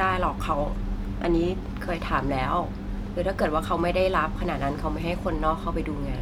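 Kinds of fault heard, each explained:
No technical fault can be heard in this speech recording. There is nothing to list under any kind of fault.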